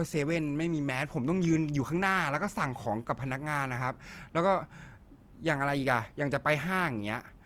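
Throughout, the speech sounds grainy and rough, with noisy texture in place of clean tone. This is likely Opus compression at a low bitrate near 24 kbps.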